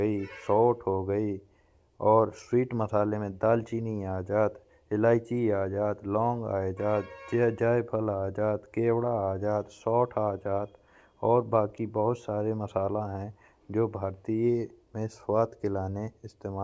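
No technical faults are audible.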